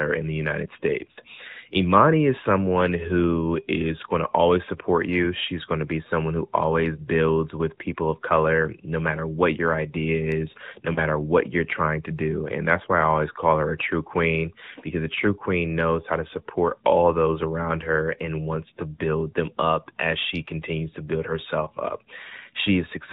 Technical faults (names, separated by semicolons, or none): AMR narrowband mobile codec; lost AMR speech frames